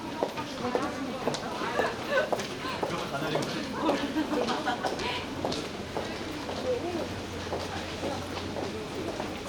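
No technical faults can be heard at any point in this recording.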